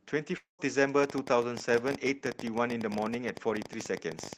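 From 0.37 to 0.61 s the speech breaks off in a long network dropout. About 220 ms of audio is missing, most likely because packets stopped arriving. The receiver stretches the last sound into a fading buzz, then leaves about 140 ms of near-silence before speech resumes with the gap simply gone. Unlike a brief glitch or a single repeated frame, the smeared tail and dead stretch show a lost block that is never recovered.

From 1.04 s to the end, a train of clicks runs over the speech at about 12.8 per second, spaced unevenly. Each tick has much the same sharp shape and stands out well above the speech, so it is audible through pauses as well as words. Nearby electrical interference or a faulty connection or power supply is the likely source. The sustained, repeating pattern sets it apart from isolated pops or clipping, which would follow loud moments.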